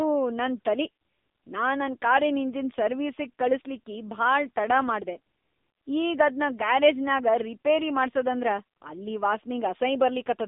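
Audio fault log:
Throughout, AMR narrowband mobile codec: the speech passed through a 2G/3G-style mobile speech coder at a low bit rate, which fits the 6.7 kbps mode. The codec rebuilds the voice from a vocal-tract model fed with a few pulses per 5 ms subframe, so heavy coding damage makes it sound buzzy and synthetic. Nothing above 3.8 kHz survives, and the phone-line band of roughly 250 Hz to 3.7 kHz leaves it thin and boxed-in.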